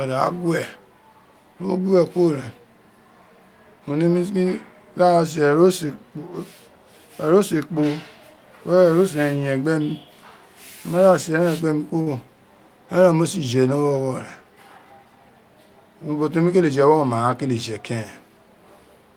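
A short stall from a late packet comes at 12.01 to 12.08 s, just after "se eren gbe mi". A packet was late, and the jitter buffer emptied before it arrived. The receiver stretched the last sound for about 50 ms and then picked up from the same point, so nothing is lost. The held sound lingers slightly too long with a faint buzzy, flattened quality, and the delay is about 50 ms longer from then on.

A jitter buffer speed-up runs from 14.78 to 15.21 s. Audio had piled up in the buffer beyond its target, so the receiver trimmed it back by repeatedly cutting out tiny pitch-period-sized slices, about 50 ms in total. The speech plays at roughly 111% of normal speed while keeping its original pitch. It sounds briefly rushed, as if the talker suddenly hurried.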